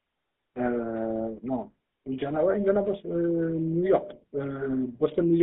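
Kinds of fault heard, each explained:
GSM full-rate codec: the speech is rebuilt from a vocal-tract model driven by sparse pulses, so it sounds plainly buzzy and gravelly, squeezed into a band of 200 Hz to 3.6 kHz.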